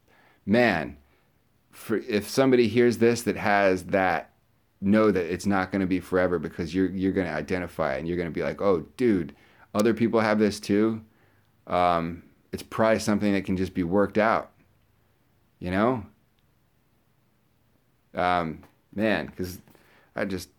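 At 9.79 s there's a sharp snap sitting right on top of the speech, an electrical switching spike. It's over in well under a hundredth of a second and peaks fairly hot, somewhere around -10 dBFS. The likely culprit is a nearby switch, motor or static discharge throwing a brief arc that the audio line picked up, which is why it lands as an added click.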